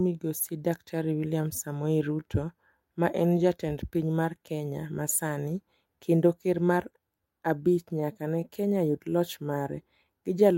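From the start, the speech suffers clock drift between sender and receiver. The sending device's clock runs about 3 percent slow, so audio arrives a little too slowly and the receiver's jitter buffer keeps draining toward empty. Unlike a burst of packet loss, which leaves one isolated gap, this is a steady mismatch that never lets up. It produces a faint, persistent unevenness in pacing across the whole clip rather than a single audible dropout.

From 0.12 s to the end, the receiver makes repeated timing corrections to cope with that slow sender. It repeatedly duplicates short fragments to keep the buffer fed, stretching the speech to about 97 percent speed and adding roughly 0.3 s in total. Each repeat is small and they fall at uneven intervals, all lengthening the sound. At most they come across as slight stutters and a tempo that drags unsteadily, not as the smooth, even slowdown of deliberate time-stretching.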